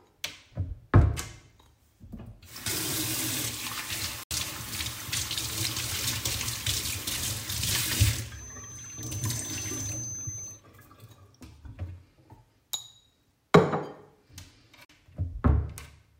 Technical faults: Bluetooth dropout; feedback whistle

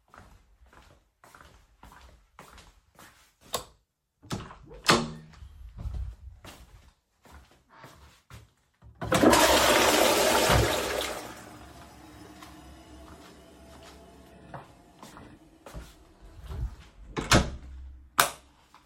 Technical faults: none

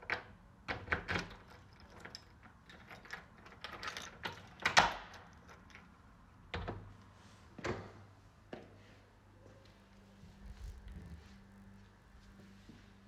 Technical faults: filter restarted on every block

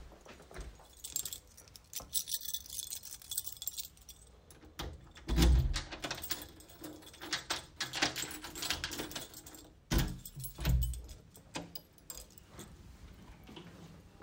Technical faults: dropped buffer (overrun)

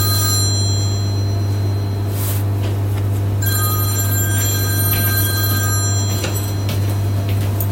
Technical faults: none

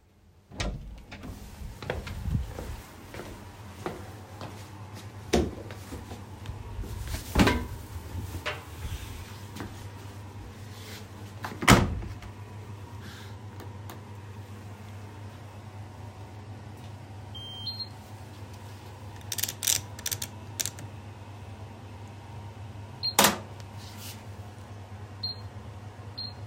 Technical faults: crude rate conversion

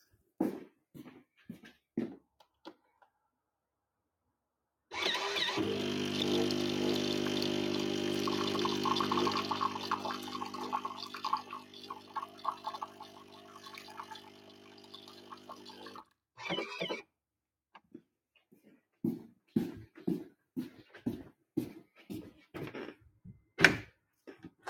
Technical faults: noise suppressor applied to music or sounds; sound cut by the noise suppressor

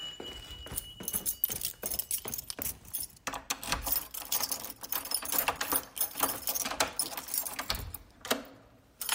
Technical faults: lost LE Audio frames

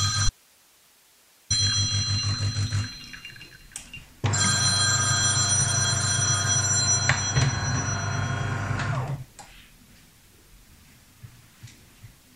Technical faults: audio dropout to a faint residue

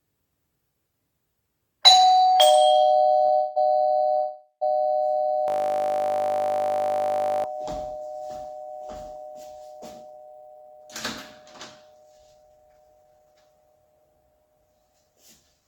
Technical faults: short stall from a late packet; call audio freeze; system hang loop; jitter buffer speed-up

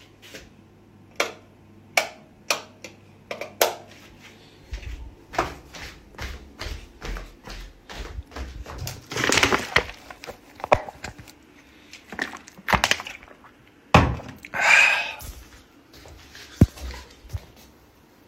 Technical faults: damaged data in a compressed stream

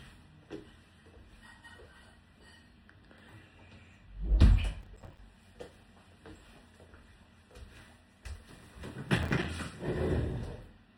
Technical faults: processor overload crackle

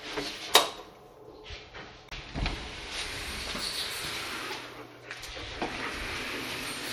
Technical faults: MP3 compression; damaged data in a compressed stream

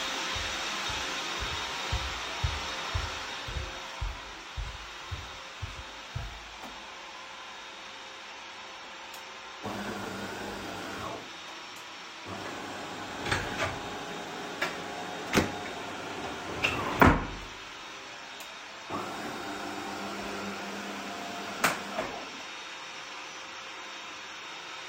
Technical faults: none

